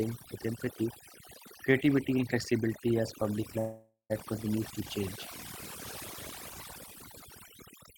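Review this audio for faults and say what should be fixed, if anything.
Overdone noise removal runs through the whole clip. The background drops and breaks up into twinkling specks. Quiet parts of the speech vanish along with the noise. This happens because the reducer pushes each frequency band down whenever it sits close to the noise estimate. Soft speech energy falls under that threshold and gets cut. Prevention: set the noise reduction much gentler, and leave some floor in place.

A call audio freeze runs from 3.59 to 4.12 s. It comes right after "and flexibility as public". The last sound carries on as a fading buzz or hiss for about half a second. About 140 ms of that is silence. Then the speech resumes at "continues to change". Nothing is lost. The pause is simply inserted, and everything after it arrives about 0.5 s later. This likely comes from delayed packets draining the jitter buffer. 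Prevention: give the jitter buffer more depth, or fix the network delay spikes that starve it.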